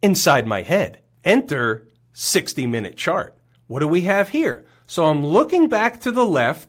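A speech recording with three packet-loss faults close together. Right after "do we have", at 4.51 to 4.57 s, there is short concealed packet loss. About 40 ms of audio never arrived. The receiver filled the gap by extending the preceding sound, so it comes across as a brief smear. Two lost packets were rebuilt from error correction, at 4.55 s and 4.71 s, each about 20 ms long. The following packets carried low-bitrate copies, so there is no gap. Those frames sound rougher and noisier.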